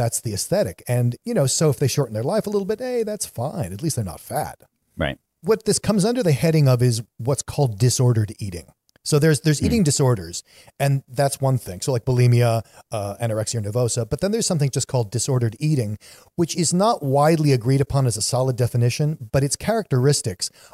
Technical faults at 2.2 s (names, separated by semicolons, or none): none